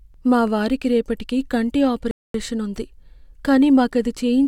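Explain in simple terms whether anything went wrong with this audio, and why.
Just after "మా వారికి రేపటికి కంటి", the speech falls silent from 2.11 to 2.34 s, then carries on from exactly where it stopped. That is a rebuffering stall: the player ran out of downloaded audio and waited. Unlike a dropout, nothing is skipped; about 0.23 s is simply added.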